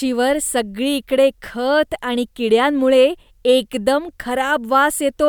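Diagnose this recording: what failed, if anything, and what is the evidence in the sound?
Nothing failed in this recording, and the sound gives no evidence of any fault.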